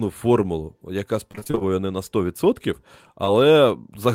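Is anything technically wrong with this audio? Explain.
Yes, there are two packet-loss faults in this speech.

From 1.31 to 1.63 s there is repeated packet loss, producing a robotic sound. Audio kept failing to arrive, and each gap, up to 25 ms, was patched by extending the preceding sound. About half of this stretch is synthetic fill, which suggests roughly eight lost packets. The result is choppy, with pieces missing. On a spectrogram, harmonics turn smeared and flattened in short blocks. The waveform shows repeated, overly regular cycles between stretches of real signal.

Between 3.25 and 3.29 s there is a short concealed packet loss. About 20 ms of audio went missing, and the decoder bridged the gap by continuing the last sound before blending back into the real signal. It is heard as a brief smear or wobble. On a spectrogram it looks like a thin vertical band where detail is blurred or held steady. 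The waveform shows a short section that repeats the prior shape instead of changing naturally.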